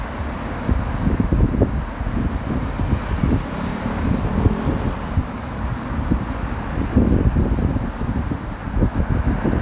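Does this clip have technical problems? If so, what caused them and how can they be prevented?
No, the signal shows no technical faults anywhere in this recording of sounds.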